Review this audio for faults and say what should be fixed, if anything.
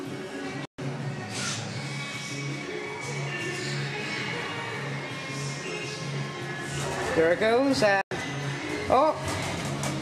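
The sound snaps to silence within about 3 ms at 0.65–0.79 s (128 ms) and 8.01–8.12 s (96 ms): a digital broadcast dropout, where the receiver muted on lost or corrupted frames. A stronger signal at the receiver, or better antenna placement, would prevent it.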